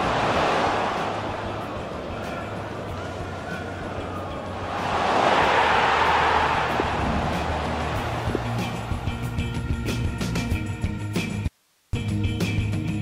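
Audio dropout to a faint residue, from 11.48 to 11.93 s: the sound cuts off abruptly, and for just under half a second only a soft hiss remains, roughly 40 dB below the normal level, before the signal returns just as suddenly. The hard edges rule out a pause or fade. The likely cause is that the wanted signal was briefly lost upstream while the path after the break stayed live, passing on only its own noise floor.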